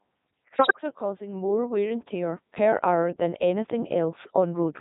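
Across the whole clip the speech sounds robotic and buzzy, with a synthetic timbre. This is a Codec 2 vocoder at 3.2 kbit/s with heavy damage. Only pitch, voicing, energy and a spectral envelope are sent, and the decoder rebuilds the sound from sine waves, so the original waveform is lost.

From 0.56 to 0.81 s, just before "are causing more wear", the voice lurches in pitch, level and tone and breaks into warbling, bleeping gibberish. These are bit errors on digital voice radio. A rate of around 7 percent corrupts the parameters that set each vocoder frame, so the decoder synthesises nonsense.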